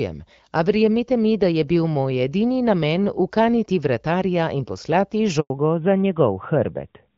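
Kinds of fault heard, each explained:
Handover gap: The call switched networks after "ukaniti vratarja in poslati", and no speech arrived for 100 ms, from 5.40 to 5.50 s. The voice cuts to silence.
Fallback to narrowband: From 5.50 s the call drops from HD Voice to a narrowband codec. Nothing above 4 kHz remains, so the voice turns duller and rougher.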